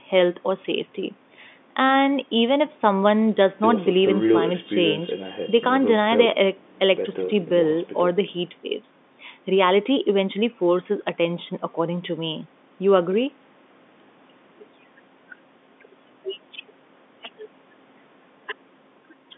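No technical faults are audible.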